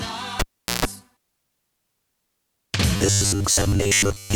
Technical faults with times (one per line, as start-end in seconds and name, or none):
0.40-0.85 cable pulled and plugged in
2.96-4.35 robotic sound from repeated short buffers